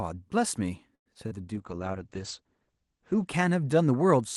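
From 0.95 to 1.08 s the speech stops, fading to about 100 ms of silence, then resumes where it left off. This call audio freeze likely comes from delayed packets draining the jitter buffer.

Short concealed packet loss follows at 1.14 to 1.17 s and 1.27 to 1.44 s. Lost audio is patched by extending the previous sound, giving brief smears.

From 1.56 to 3.35 s a call bitrate drop takes Opus from 40 to 10 kbps. The band narrows from 12 kHz to 8 kHz, so speech turns muffled and rough.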